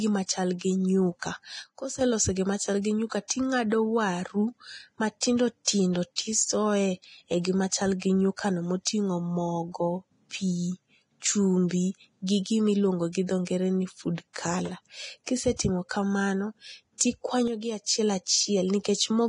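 Speech, and it carries heavy codec damage throughout: a hissy, grainy texture, smeared consonant attacks and nothing above 10.6 kHz. The likely cause is low-bitrate Vorbis compression, and the damage fits a rate near 29 kbps. Unlike a plain low-pass filter, the treble that remains is noisy rather than clean and dull. Two sudden gain jumps drop the level abruptly, by about 8 dB from 1.62 to 2.01 s and by about 6 dB from 17.48 to 17.83 s. Speech and background noise fall together in a single step, which sets these apart from a fade or from compressor pumping, and the likely cause is a gain setting applied without a ramp. Pre-echo puts a short hiss just before sharp attacks, at 5.20 s (19 ms), from 5.65 to 5.67 s and from 16.98 to 17.01 s (28 ms each). Because the smear comes before the onset rather than after it, this is pre-echo and not reverb or a click.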